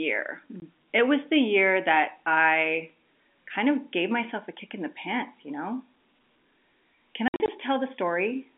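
At 0.60 to 0.62 s there's a 20 ms hole, then from 7.28 to 7.48 s about 120 ms drops out in scattered gaps, longest 60 ms. That's packet loss filled with silence, which fits 20 ms packets. The G.711 telephone band carries the speech around these hard-edged dropouts.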